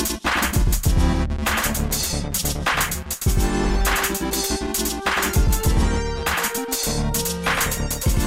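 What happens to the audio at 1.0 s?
At 1.0 s the doubled audio track is present, as it is throughout the clip. A full-band second copy trails the original by roughly a tenth of a second at about equal level, with no decay or room colour, most likely from a slower second capture path mixed back in.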